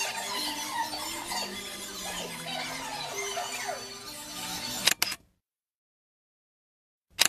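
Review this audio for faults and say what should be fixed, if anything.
An overlap between stream segments occurred: the time stamps of two adjacent segments, which appear to be about 6 s long, claimed the same stretch of time, and the player discarded the overlapping portion even though that audio had never actually been duplicated. Roughly 20 ms of sound, from 2.88 to 2.90 s, is simply missing, so the waveform jumps across the gap and a brief click or tiny skip is heard at that point. To prevent it, make the segmenter write contiguous, non-overlapping time stamps at each boundary.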